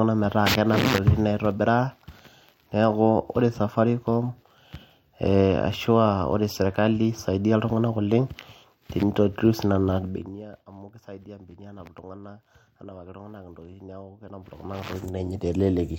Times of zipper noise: 9.96-10.44, 14.24-15.46

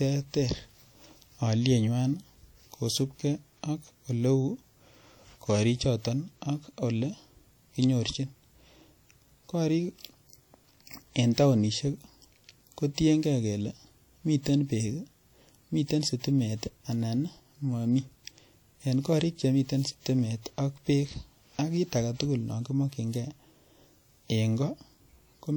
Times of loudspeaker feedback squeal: none

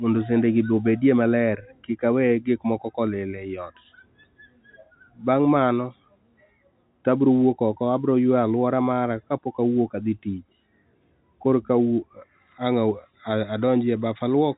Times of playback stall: none

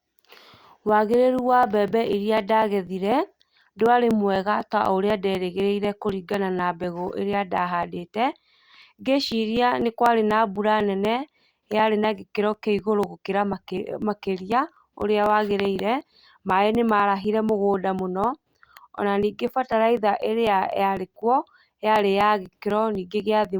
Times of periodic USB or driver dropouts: 0.15-23.45

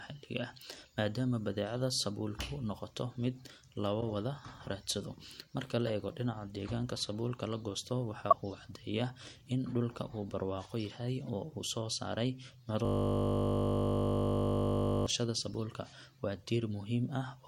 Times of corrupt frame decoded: 4.01-4.03, 5.87-5.90, 8.30-8.34, 11.24-11.29

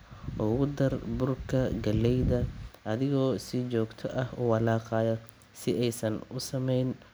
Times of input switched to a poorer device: none

